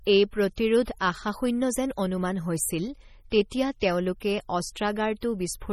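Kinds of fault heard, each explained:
MP3 compression: heavy bit starvation, likely from a low-bitrate encode near 32 kbps, leaves the speech watery and swirly with smeared attacks and nothing above 17.3 kHz.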